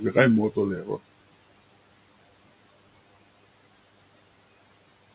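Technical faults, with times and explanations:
Throughout, mains buzz: a steady, raspy 50 Hz buzz around 25 dB below the speech. Switching spikes entering twice per mains cycle, through something like a dimmer, rectifier or poor shielding, spread harmonics upward, audible up to the call path's 4 kHz band edge.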